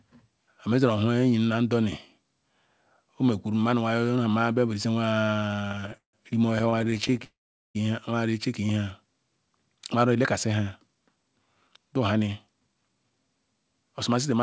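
From 5.28 to 7.25 s there are repeated stalls, a stutter. The sound keeps catching and restarting. Dozens of short breaks are filled by stretching the last sound, the longest about 158 ms. Together they add about 0.6 s, nearly a third of that span. Nothing is lost. Packets were arriving late or too slowly. The jitter buffer kept running dry, and the receiver filled each wait.

At 7.25 s a call audio freeze follows, lasting until 7.77 s. A brief buzz or hiss trails off, then comes about 0.43 s of silence. The sound resumes exactly where it stopped, so half a second of gap has been inserted and nothing dropped. The likely cause is packets held up in transit, leaving the jitter buffer empty. The pause fits the receiver then holding about 500 ms more delay.

From 8.67 to 8.85 s there is a jitter buffer slow-down. The sound runs at about 83% speed. Its pitch stays the same. That short stretch is drawn out by about 38 ms. 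The buffer was low or had just raised its target delay, so the receiver repeated single pitch periods to rebuild a reserve.

From 10.81 to 13.11 s comes a jitter buffer speed-up. The sound runs at about 112% speed with pitch unchanged, so it feels hurried. About a third of a second is trimmed in total. The buffer held more audio than its target, so the receiver cut short pieces, one or a few pitch periods at a time, to bring the delay down.

Throughout, the G.722 call path leaves nothing above 8 kHz.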